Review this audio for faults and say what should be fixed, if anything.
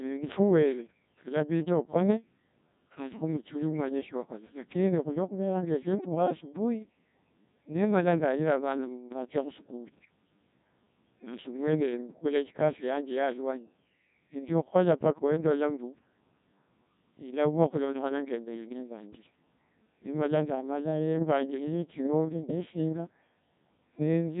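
The speech was passed through a Codec 2 vocoder, a very low-rate digital-radio codec, for its whole length. This vocoder discards the actual waveform and transmits only pitch, voicing, energy and a coarse spectral envelope, which the decoder rebuilds from sine waves. The damage is heavy: the voice sounds robotic and buzzy, nothing survives above 3.8 kHz, and the degree of coarseness fits a bitrate of about 1.6 kbit/s. To prevent it, record or relay the speech over a path using a waveform-preserving codec at a higher bitrate.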